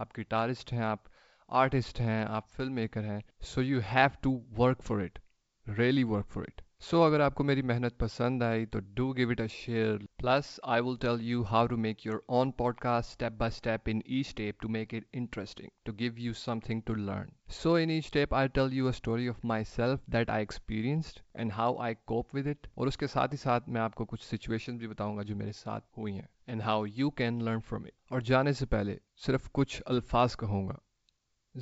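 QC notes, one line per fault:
29.88 to 29.98 s, bit errors on an ADPCM link: a short cluster of pops and a rough, gritty burst with brief level jumps. Flipped bits at a low rate, around 0.2 percent, knock the G.722 decoder's step size and predictor off track, so each error rings on for milliseconds.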